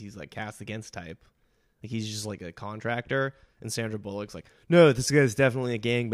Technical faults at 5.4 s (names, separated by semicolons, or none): none